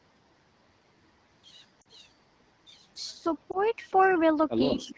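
A speech recording carried over a phone call with wideband audio that stops at 8 kHz, this clip has three faults. Lost AMR speech frames appear at 1.81 to 1.87 s, a gap of about 40 ms that fits two consecutive 20 ms frames, and again at 3.51 to 3.57 s, fitting a single frame. In each case the decoder had no valid data and filled in by repeating the last good pitch and vocal tract shape at falling gain. The single frame gives a short warble or dip, the two-frame run drops toward near silence, and the voice comes back weak or rough for a moment. That smooth, synthetic smear separates this fault from a plain cut or a packet gap, which would click or go silent. Near the end, from 4.71 to 4.92 s, a delayed copy of the speech arrives about 199 ms behind the original and roughly 10 dB quieter. This is an echo leak, likely from a far end on a loudspeaker whose echo canceller let some of the returned sound through. 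Its fixed delay and repeated character set it apart from room reverberation, which would follow immediately and decay smoothly. Overlapping that, from 4.76 to 4.97 s, the main speech drops in level by about 25 dB at its deepest over roughly 200 ms. This is speech suppressed in double talk, likely triggered when both ends were sounding at once and the echo canceller attenuated the near talker along with the echo. Unlike a lost frame, it is a level cut lasting a fifth of a second, not a stretched or warbling fill.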